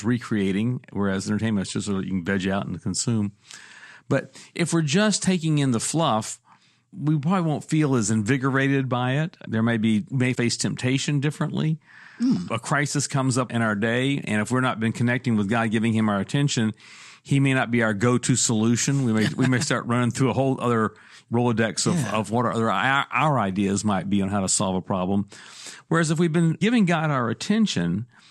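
From 0.39 s to 27.81 s, clock slip clicks recur about every one and a half seconds, roughly twenty in all. They sound like faint, regular ticks riding on the speech and vanish in pauses. The likely cause is two devices running on unsynchronised clocks that differ by around 20 ppm, so one sample is periodically dropped or repeated. On a spectrogram each slip is a thin broadband vertical line, and the waveform shows a tiny step, consistent with a single-sample discontinuity.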